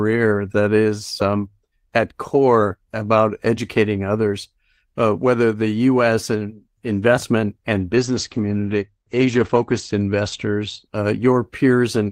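Right after "and investment and", at 7.96 s, the speech turns muffled and rough-edged, losing its top end and picking up a coarse, smeared texture until 10.91 s. This is a call bitrate drop. The connection's bandwidth estimate fell, so the encoder's rate was cut from 32 kbps to 13 kbps, bottoming out for about 1.6 s. At that rate the codec quantises more crudely and narrows the audio band from 20 kHz to 8 kHz before the bitrate recovers.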